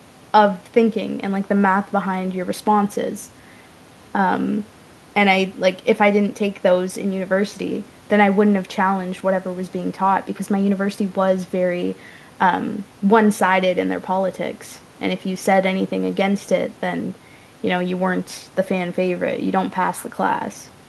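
No technical faults can be heard anywhere in the recording, with the speech signal holding steady in level and continuity throughout.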